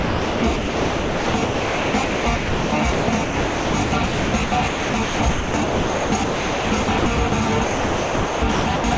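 Sound chopped by the voice detector, from 0.00 to 7.32 s and from 7.64 to 8.84 s: about 5.2 s and 1.0 s of audio become synthetic comfort noise, likely because the sender's voice detector repeatedly stopped sending, leaving holes in call audio that stops at 8 kHz.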